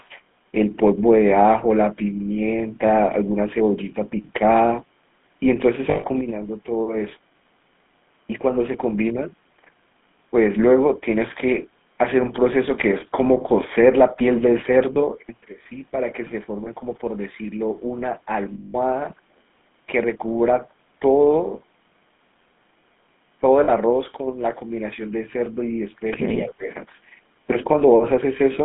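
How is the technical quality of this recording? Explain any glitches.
The recording has been through a low-bitrate mobile voice path. The codec damage is plainly audible throughout, with five brief dropouts and one short dip near the end.

The GSM full-rate codec is present for the whole clip. The audio is confined to roughly 150 Hz to 3.5 kHz. The coder models the vocal tract and drives it with a coarse, regularly spaced pulse excitation, discarding most of the excitation detail. That produces a buzzy, gravelly roughness on the voice. The character fits the 13 kbps full-rate coder.

Lost GSM frames occur at 5.90–6.05 s (140 ms), 14.94–14.97 s (20 ms), 16.64–16.68 s (20 ms), 18.54–18.76 s (200 ms) and 23.64–23.70 s (40 ms). The decoder fills each gap by reusing the last good frame's parameters. The short gaps come across as a brief metallic smear. The 140 ms and 200 ms gaps sound like a held, ringing buzz. 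Their lengths fit runs of about seven and ten 20 ms frames.

Speech suppressed in double talk occurs at 26.35–26.70 s. The speech level drops by about 20 dB for roughly 0.3 s. The likely cause is the echo canceller meeting simultaneous talk from the far end. It cannot tell the near talker from loudspeaker echo, so it attenuates the whole signal.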